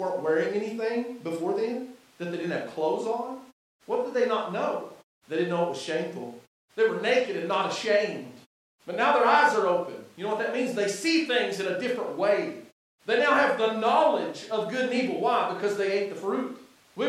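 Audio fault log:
No faults detected anywhere in this speech recording.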